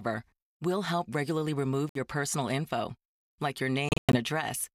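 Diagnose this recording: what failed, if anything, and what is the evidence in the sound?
The wireless playback link likely suffered a Bluetooth dropout: packets arrived too late and were discarded. The speech cuts to abrupt silence at 1.89–1.99 s, after "will help regularly remove", and again at 3.89–4.17 s, after "personal info like your", where about 183 ms goes missing in gaps up to 107 ms long. Each time it resumes as though it had kept playing.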